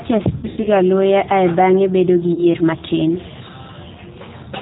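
The speech has passed through the G.729 codec, which rebuilds the voice at 8 kbit/s from a vocal tract filter, a pitch predictor and a few pulses per frame. Nothing above 4 kHz survives, so the voice sounds muffled, plainly rough and slightly synthetic throughout.

Between 0.37 and 0.67 s there is VoIP packet loss concealed by the speech codec. About 160 ms of audio went missing in gaps scattered over roughly 280 ms, the longest lasting 80 ms. The decoder filled each gap by extending its last pitch and filter at falling gain, so the voice smears into a buzzy tone or coloured noise that fades, and stays weak or distorted as the stream recovers. A shorter loss from 2.33 to 2.44 s covers 40 ms, which fits two lost packets, and brings a brief dip.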